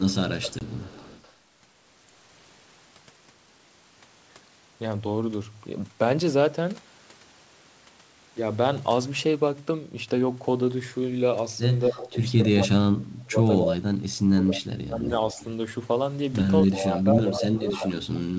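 Echo leak runs through this speech recording at 0.12–1.33 s, 12.04–12.64 s, 13.66–13.76 s, 15.39–15.44 s, 16.72–17.02 s and 17.34–17.75 s: a copy of the voice trails about 0.25 s behind, from about 25 dB down to only about 5 dB below the speech, likely because a far-end loudspeaker's sound was not fully cancelled and was sent back. Packet loss on an ADPCM call cuts a hard-edged 20 ms hole at 0.59–0.62 s, which fits a couple of lost packets, and the decoder's predictor and step size must then resynchronise, so the speech comes back briefly slightly distorted. Speech suppressed in double talk appears at 11.88–15.41 s, where about 3 s of the voice dips by as much as about 35 dB, and again at 16.86–17.95 s with about 1 s of dips of up to about 15 dB, likely because the echo canceller could not separate this talker from the overlapping far-end echo and turned everything down.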